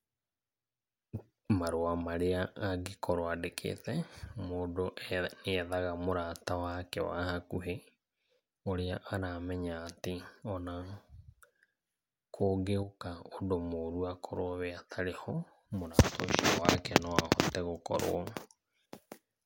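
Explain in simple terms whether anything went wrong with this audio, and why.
Yes, there is a sudden gain jump in this speech clip. From 12.83 to 13.32 s, the whole sound, background noise included, instantly drops to a noticeably quieter level, then jumps back. This is likely a volume setting applied abruptly rather than faded in smoothly.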